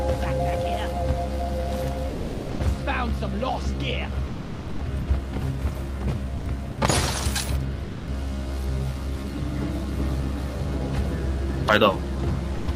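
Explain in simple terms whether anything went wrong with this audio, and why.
Sound dropped by the voice detector, seven times: 2.09–2.59, 4.27–4.79, 5.01–5.07, 6.37–6.45, 6.71–6.77, 7.83–8.07 and 12.55–12.67 s. The sound briefly gives way to steady background noise, likely because the sender judged it as silence, rather than the stuttering or warbling of network dropouts.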